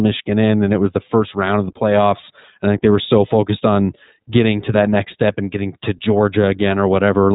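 From start to finish the speech has gone through the iLBC codec, and the damage is plainly audible. Nothing above 4 kHz survives, so it sounds boxed-in and a bit rough and synthetic. Each chunk is coded on its own, which fits the 15.2 kbps mode with 20 ms frames.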